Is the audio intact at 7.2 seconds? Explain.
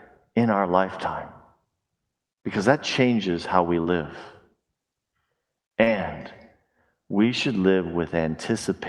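No. From 7.23 s to 7.25 s, a 20 ms stretch sounds briefly rougher and noisier, with no gap. This is a lost packet rebuilt from error correction: the next Opus packet carried a low-bitrate copy, which the decoder played in its place.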